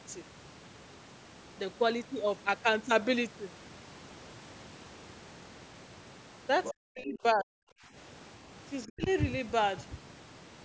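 A speech recording, carried through call microphone processing with nothing above 8 kHz, shows the other side's voice leaking through from 6.64 to 6.73 s as a brief second talker roughly 10 dB under the main voice, likely residual loudspeaker echo the echo canceller missed. Speech suppressed in double talk follows from 6.71 to 7.6 s and again from 8.85 to 9.08 s, the talker's own voice dropping by as much as about 40 dB in pieces. This is likely the canceller ducking both signals at once, which sets it apart from network dropouts, whose gaps ignore the far side's activity.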